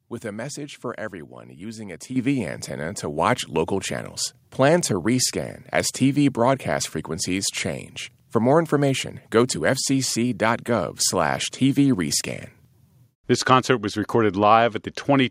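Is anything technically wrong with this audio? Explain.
Yes. At 2.16 s the speech and the background noise jump up together by about 8 dB, and at 3.18 s by about a further 3 dB: microphone volume stepped up, the call software raising the input level in single steps.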